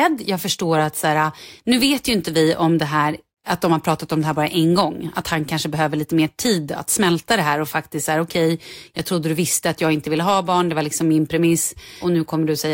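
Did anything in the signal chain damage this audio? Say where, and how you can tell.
No, nothing in the chain audibly damaged this speech.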